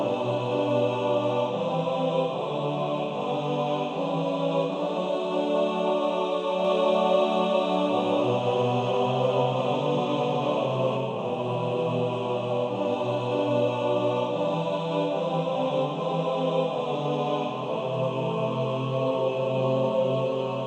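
From 6.65 s to 10.97 s, the sound is joined by a second, identical copy of itself trailing a little under half a second behind, at roughly the same loudness. The copy is full-band, with no decay or room colour, and it cuts in and out abruptly at those edges. This doubled audio track is likely the result of the signal being captured a second time through a slower path, or of an edit leaving two copies out of step.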